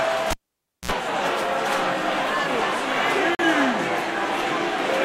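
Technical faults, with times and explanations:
0.31–0.91 s, cable pulled and plugged in: A pop, then about 0.56 s of near silence with a 60 ms burst of 60 Hz mains buzz. Another pop marks reconnection.
3.35–3.45 s, digital broadcast dropout: The sound cuts out for about 43 ms, then returns. The receiver muted on bad data, which fits one lost frame.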